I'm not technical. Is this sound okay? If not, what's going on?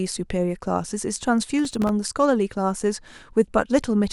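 No. There is processor overload crackle from about 1.59 to 1.89 s in this speech. The computer handling the audio briefly got too busy to deliver each very small chunk of sound on time, and around ten chunks, each lasting only a few thousandths of a second, went missing. Each miss left a tiny hard-edged silent gap, and packed together those gaps sound like a short burst of gritty crackle that stops once the load eases.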